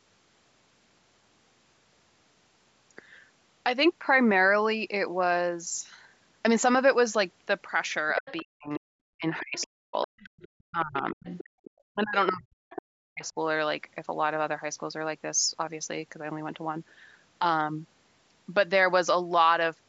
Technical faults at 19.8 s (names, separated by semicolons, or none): none